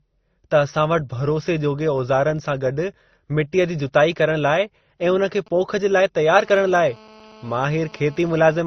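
Speech plays with a dull, smeared quality. The swirly, watery artefacts of one codec sit on top of the grainy ones of another, which points to transcoding between lossy codecs, likely an MP3 stage near 32 kbit/s re-encoded as Opus at a similar rate, with the lower band limit carried through. A low buzz at 46.9 Hz runs under the whole clip while the speech keeps its normal speed and pitch. That is the signature of a block size mismatch (truncated): one stage writes blocks that fit a 1024-sample size, the next reads slightly fewer, and the discarded tail of each block leaves a tiny seam at the block rate. From 5.47 to 6.34 s a galloping dit-dit-dit of short buzzes appears, roughly 25 dB below the speech. These are GSM signalling bursts, where a nearby 2G phone briefly contacts the network and the audio circuitry rectifies the radio pulses at 217 Hz. From 6.39 to 8.61 s a steady, harsh, harmonic-rich buzz at 217 Hz follows, about 26 dB below the speech. 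This is GSM phone buzz, from a phone now in a call, transmitting in bursts 217 times a second.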